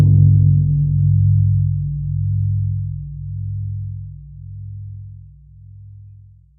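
No technical faults can be heard anywhere in the recording, and the signal stays steady and intact throughout.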